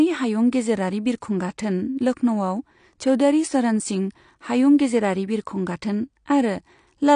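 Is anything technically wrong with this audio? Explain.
Yes, the speech carries plainly audible damage from AAC compression throughout. Nothing exists above 9.8 kHz, so it sounds dull, with warbling, fizzy smearing on sibilants, likely low-bitrate AAC-LC coding, which fits about 32 kbps. A spectrogram shows a hard ceiling.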